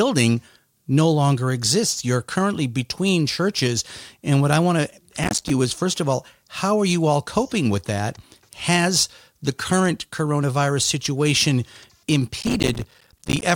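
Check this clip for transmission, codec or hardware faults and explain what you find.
Processor overload crackle occurs twice, at 5.23–5.50 s and 12.40–13.43 s. Dozens of short buffers, a few milliseconds each, miss their deadline and drop to silence, producing gritty crackling across the speech.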